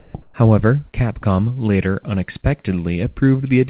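From 0.00 to 0.14 s the opening is steady, flat noise, with about 60 ms of speech missing. This is likely sound dropped by the voice detector, which mistook the onset for background and sent comfort noise instead. Between 0.22 and 0.34 s the real background, sitting about 42 dB below the loud parts, turns into a featureless hiss about 4 dB quieter. That points to comfort noise in place of the background during a discontinuous-transmission pause. Throughout, nothing is heard above 4 kHz, consistent with a narrowband call codec.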